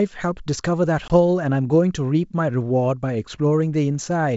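At 1.08 to 1.11 s, packet loss on an ADPCM call cuts a hard 20 ms hole. The speech then resumes briefly unsettled while the decoder resynchronises.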